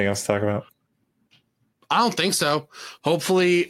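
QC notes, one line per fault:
No faults found on this speech clip.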